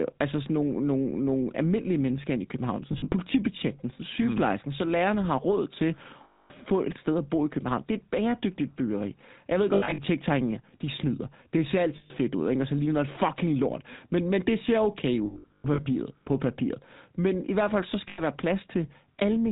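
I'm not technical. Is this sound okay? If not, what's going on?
No. The whole recording has passed through the GSM full-rate codec, the original mobile-phone voice system. It rebuilds the voice from a simplified model and a coarse pulse signal, and it discards everything above 4 kHz. Here that damage is plainly audible: the speech sounds muffled, buzzy and gravelly throughout, like an old mobile call. Crisp sounds such as "s" lose their edge.

There are also six spots with lost GSM frames, where pieces of the signal never arrived. For each gap, the decoder repeats the last good piece, so the sound briefly turns into a rough, metallic ring. This happens at 2.92–3.13 s, 6.24–6.51 s, 9.74–10.0 s, 11.96–12.12 s (just before "ud ikke og så"), 15.26–15.87 s (between "men det ser okay" and "på papiret") and 18.08–18.22 s (just after "i hvert fald så"). The longest is at 6.24 s, with about a quarter-second lost in one stretch. 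The 15.26 s spot has the most loss in total, broken into short bursts over about six-tenths of a second.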